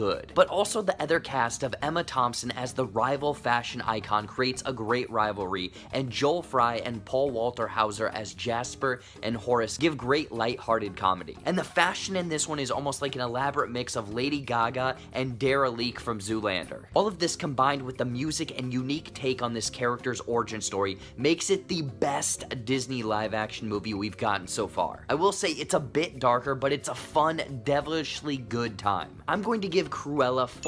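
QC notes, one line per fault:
Nothing stood out on listening to the audio.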